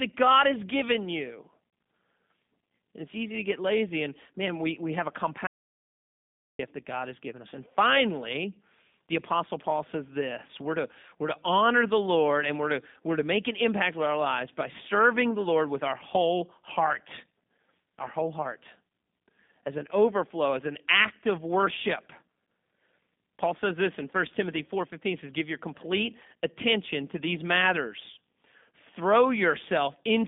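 From the first second the speech carries the G.729 codec's signature. Nothing sits above about 3.7 kHz, and the usable band runs from roughly 150 Hz to 3.6 kHz, yet the sound is not just muffled. Each short frame is rebuilt from a filter, a pitch estimate and a few pulses, giving a grainy, slightly synthetic rasp that plain telephone filtering would not add. That roughness points to a low-rate 8 kbit/s coder such as G.729A.

At 5.47 s the audio drops out to silence until 6.59 s, about 1.12 s lost. The gap is silent with no room tone at all, which separates it from a natural pause. It is also unlike codec packet-loss concealment, which would fill the hole with smeared, repeated sound. The cut comes abruptly mid-flow, likely from the input being lost while the recorder kept writing silence.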